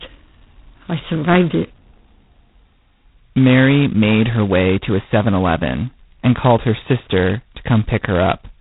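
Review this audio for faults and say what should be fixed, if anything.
Heavy G.726 ADPCM damage runs throughout the speech: nothing passes above 3.9 kHz, and a harsh, rasping hiss rises and falls with the speech level. The coarse error fits 16 kbit/s, at two bits a sample. Unlike plain band-limiting, the noise tracks the signal; unlike perceptual codecs, there is no swirl. Prevent it by carrying the call at 32 kbit/s or a wideband codec.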